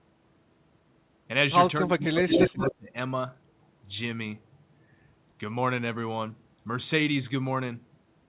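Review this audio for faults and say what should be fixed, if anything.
Speech suppressed in double talk, 1.81 to 2.96 s: the speech dips by up to about 25 dB, around a second in total, likely because the echo canceller ducked both talkers.

Echo leak, 2.28 to 2.74 s: a copy of the speech returns 177 ms late at roughly the speech's own level, likely leaking past the loudspeaker side's echo canceller.

Tuning the echo canceller's double-talk detection and echo suppression, or having the far end use a headset instead of a loudspeaker, would prevent both.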